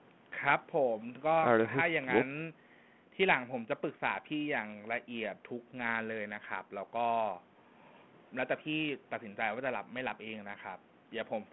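Speech over a G.726 ADPCM path at 32 kbit/s, confined to the telephone band of roughly 150 Hz to 3.4 kHz after the call microphone processing, with no technical fault to report.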